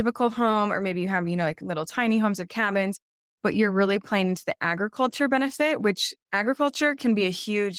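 No technical faults are audible.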